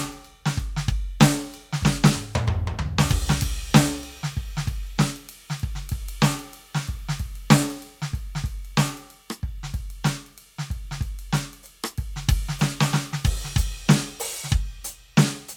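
Listening to the music closely turned up nothing that stood out as a technical problem at any point.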